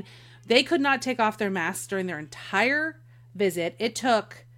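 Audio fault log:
No fault is heard in the speech.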